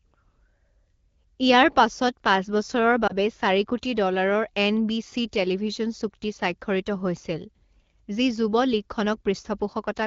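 Speech over an AMR wideband (HD Voice) path, whose clear, only lightly coded sound fits a rate of around 12.65 kbit/s, has one lost AMR speech frame between 3.08 and 3.12 s, just before "চাৰি কোটি". It sounds like a brief dip or warble, consistent with a single 20 ms frame. The decoder bridges the gap by repeating the previous pitch and vocal-tract settings at reduced gain. That is why it is heard as a smeared, softened moment rather than the hard silent gap or click of a plain audio dropout.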